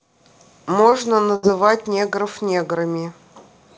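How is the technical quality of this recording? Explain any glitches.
Two brief network dropouts mar the speech, both covered over by the receiver's concealment. Nothing reaches above 8 kHz, consistent with G.722 coding at 64 kbps, so a spectrogram shows a clean ceiling there.

From 0.90 to 0.94 s there is a short concealed packet loss. About 20 ms of audio never arrived in time, and the decoder filled roughly 17 ms of it by extending the preceding sound before crossfading back into real signal. You hear a quick smear or wobble. On a spectrogram the patch runs unnaturally steady for that sliver, and the waveform joins smoothly at each end.

From 1.36 to 1.45 s a burst of packet loss removes about 80 ms, with around 70 ms synthesised. The receiver kept extrapolating the last sound while lowering its level, so a voiced sound becomes a held buzz and anything else a fading hiss, and the speech resumes further along with that stretch missing. 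On a spectrogram, the frozen patch dims toward the right edge. In the waveform, a decaying envelope is followed by an abrupt restart.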